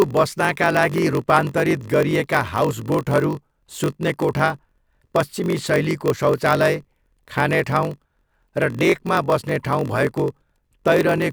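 Right from the start and all the way through, there's a block size mismatch (padded). One stage hands over shorter blocks than the next reads, which fits a 1024-sample read, so each gets a zero-filled gap. You hear a steady 46.9 Hz buzz, and the speech drags at 0.938 speed with pitch basically unchanged.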